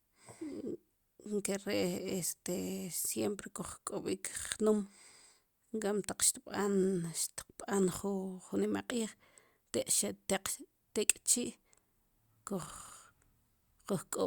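Nothing in this speech recording stands out as a technical fault at any point, so there's nothing to flag here.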